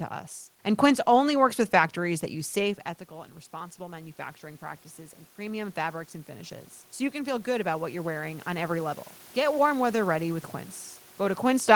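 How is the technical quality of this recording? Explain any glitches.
The recording has one technical glitch. From 2.02 to 8.98 s, just after "only works with", there is automatic gain rising. When the talker moves away at around 2.5 s, the level reaching the microphone falls by about 14 dB, and the gain control slowly adds about 11 dB to compensate. The voice and the room noise swell up together over those seven seconds, so the background grows audibly louder as the voice gradually returns toward its earlier level.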